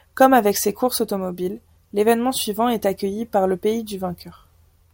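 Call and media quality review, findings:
No audible faults found.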